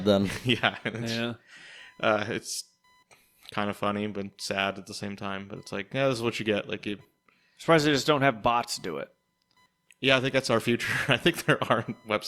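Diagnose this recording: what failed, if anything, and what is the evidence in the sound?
The analogue wiring failed: the audio circuit shares a ground with the computer, so processor, graphics or mouse load changes leak in as computer activity noise. Throughout the speech, a buzzing chirp pulsing at around 1 kHz sits roughly 40 dB below the voice, tracking machine activity rather than the talker.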